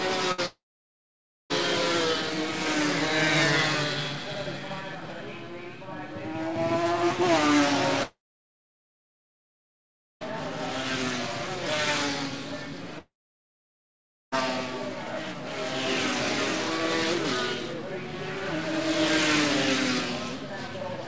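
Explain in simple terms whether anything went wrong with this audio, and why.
Yes, two things went wrong, both in how the audio travelled over the network.

First, a burst of packet loss at 0.32 to 0.40 s: a short run of audio pieces never arrived in time. The receiver filled the gap by stretching out the last bit of sound and fading it, so you hear a brief buzz or hiss. When the audio picks up again, that moment is simply missing.

Second, there are three long network dropouts, at 0.46 to 1.52 s, 8.03 to 10.23 s and 12.99 to 14.34 s. These were likely caused by the connection stalling so that nothing reached the listener for a while. Each one starts with the same fading buzz or hiss, then turns to silence for about 0.9 s, 2 s and 1.2 s respectively. The audio returns further on, and everything that should have played during the gap is lost.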